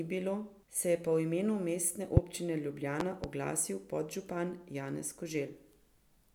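A loud pop at 2.17 to 2.20 s and a double pop at 3.00 to 3.27 s, just before "oglasil podžupan", likely voltage spikes, thumping well above the speech.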